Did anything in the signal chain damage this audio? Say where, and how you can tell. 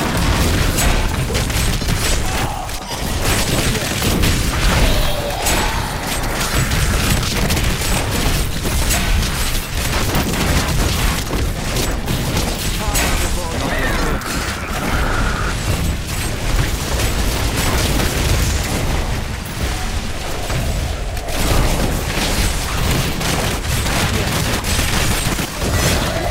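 Yes. The buffering or chunked-processing stage shows overlapping chunks. The audio was handled in blocks of 6.0 s, and each new block began about 7 ms before the previous one finished, so 7.07 ms of material plays twice at each join. That produces a brief click or stutter at 10.79 s and again at 16.79 s. The exact 6-second spacing between the two events points to a fixed block boundary, not to damage in the source.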